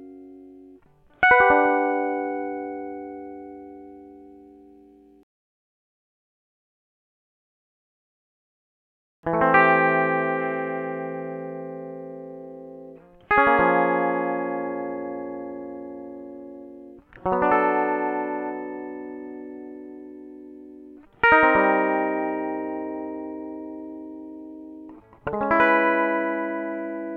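No technical faults can be heard anywhere in this music clip. There is nothing to place in time and no dropout, distortion or glitch to describe.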